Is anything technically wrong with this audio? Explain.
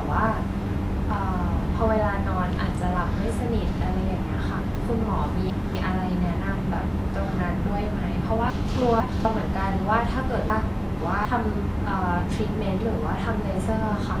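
Yes, there are two problems.

Vorbis compression, throughout: nothing is present above 14.2 kHz, and the remaining treble is hissy and grainy, with smeared consonant attacks. This is likely Vorbis coding at a low bitrate, around 35 kbps, where coarse quantisation turns high-frequency detail into noise.

Chunks out of order, at 4.75–5.75 s, 8.5–9.25 s and 10.5–11.25 s: a 250 ms segment of speech plays late, after the segments that should follow it. It lands three segments late in the first case and two in the others. Each spot sounds jumbled.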